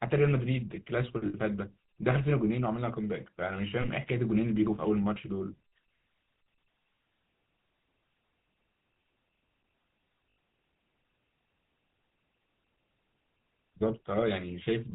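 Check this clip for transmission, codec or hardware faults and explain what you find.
Two faults are present: GSM full-rate coding across the whole speech clip, and four brief dropouts concealed by GSM frame repetition.

The GSM full-rate codec sound, consistent with 13 kbps encoding, runs throughout. The vocal tract is modelled and excited by sparse regular pulses, giving a plainly audible buzzy, gravelly roughness. A spectrogram shows an empty band above 4 kHz and smeared harmonics.

Lost GSM frames occur at 1.26–1.35 s and 10.35 s (each about 80 ms, fitting four 20 ms frames), and at 3.82–3.86 s and 5.48–5.53 s (about 20 ms each). The last good frame is repeated, producing a short metallic ring. Spectrograms show frozen, repeated bands.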